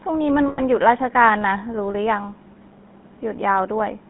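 Throughout, the speech carries the buzzy, gravelly texture of the GSM full-rate codec, consistent with its 13 kbps coding. The vocal tract is modelled and driven by sparse regular pulses, which leaves the excitation coarse. The band runs only from about 150 Hz to 3.6 kHz, so the sound is thin and dull.

From 0.48 to 0.60 s, lost GSM frames appear as a brief rough, metallic ring. About 100 ms was missing, which fits five 20 ms frames, and the decoder filled the gap by repeating the last good frame instead of leaving a clean dropout.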